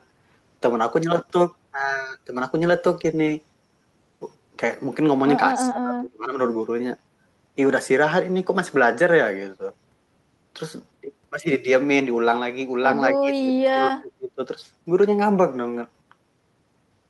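From 5.53 to 6.38 s and again from 13.15 to 14.4 s the speech sinks by roughly 30 and 35 dB, showing as dips in the waveform; this is speech suppressed in double talk, likely an echo canceller muting the talker during overlap.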